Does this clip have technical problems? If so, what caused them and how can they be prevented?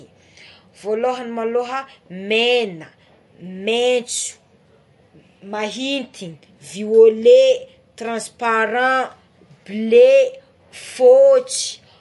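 Yes. Likely MP3 compression runs throughout the speech, start to finish, with nothing above 11.3 kHz. The encoder splits the signal into many narrow frequency lines and, short of bits, cuts the treble at a fixed point and drops weak lines that then flicker on and off between frames. That gives the plainly audible watery, swirly texture here, which fits a low bitrate around 48 kbps. To prevent it, record and deliver at a higher bitrate or in a lossless format.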